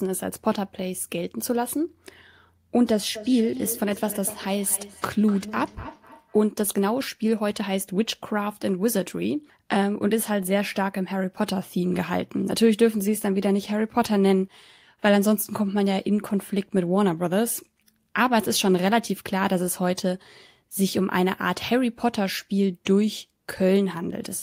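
From 3.15 to 6.52 s there's feedback echo between two devices: a second device in the room replays the call and this microphone picks it up again, beyond its own echo canceller's reach. Speech returns roughly every third of a second, thinner and ringing, peaking about 15 dB below the talker.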